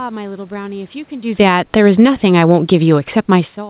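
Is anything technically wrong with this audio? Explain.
Yes. From 1.26 to 3.57 s, automatic gain falling: the call's gain control judged the input too loud or its background noise too strong and gradually lowered its gain by about 4 dB. The speech and the room noise behind it sink together, so the level drops as a whole.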